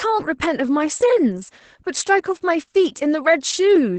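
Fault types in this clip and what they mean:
Opus voice compression: Runs throughout, using Opus in its SILK speech mode. Nothing above about 8 kHz survives, so the speech sounds muffled. Coarse coding of the excitation adds a hoarse, slightly robotic edge. The damage is heavy, fitting a bitrate near 10 kbps.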